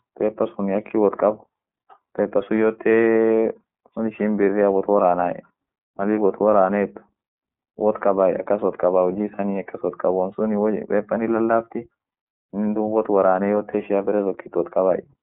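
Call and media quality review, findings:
iLBC codec, whole clip. Narrowband speech, band roughly 200 Hz to 3.5 kHz. Plainly audible roughness, synthetic edge. Independent frame-by-frame excitation coding. Frame timing fits 30 ms mode, bitrate around 13.3 kbps. Nothing above 3.5 kHz survives.

Lost iLBC frames, 9.36 to 9.39 s and 13.71 to 13.75 s. Brief held, buzzy vowel-like fill. Each gap fits one lost 30 ms frame. Decoder concealment repeats last pitch cycle plus noise. Speech recovers immediately after each gap, frames being self-contained.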